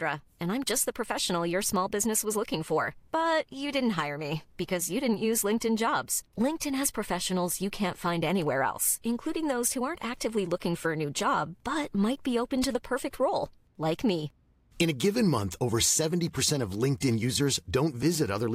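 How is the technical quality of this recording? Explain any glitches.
The technical quality of the recording holds up, and there are no glitches to explain.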